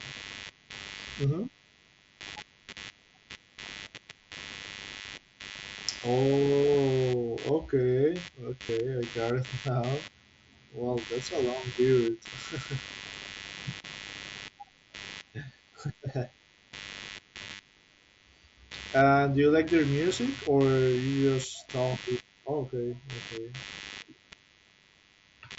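Computer activity noise runs through the whole clip: a buzz pulsing around 100 times a second, roughly 20 dB below the speech, tracking machine load rather than speech.

Concealed Bluetooth headset packet loss causes a barely audible patch at 2.28 s, a brief buzzy hold from 8.67 to 8.69 s, then scattered gaps from 17.44 to 17.59 s, the longest lasting 45 ms. Unlike broadband noise bursts, these repeat the last waveform as a steady tone, warbling as real audio resumes.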